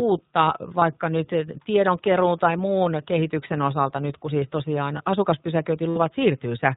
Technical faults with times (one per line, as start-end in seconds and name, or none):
0.00-6.77 iLBC codec
0.80-0.82 lost iLBC frames
2.83-2.87 lost iLBC frames
5.91-5.97 lost iLBC frames